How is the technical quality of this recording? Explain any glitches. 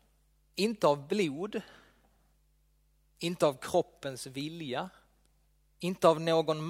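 No technical faults can be heard anywhere in the recording, so there are no glitches to explain.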